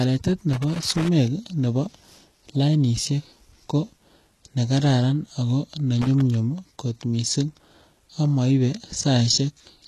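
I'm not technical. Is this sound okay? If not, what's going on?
No. Loose connector crackle appears twice, from 0.53 to 1.08 s and from 6.02 to 6.21 s, just after "nekararan ako ne." A worn or dirty plug contact flickers on and off as it moves, chopping the signal into a brief, uneven scratching sound.

HE-AAC compression is the likely cause of the gritty, lispy quality heard throughout, especially on s sounds. This squeezing method stores only the lower tones and fakes the treble by copying them upward, so the highest sounds come out metallic and stop around 12 kHz.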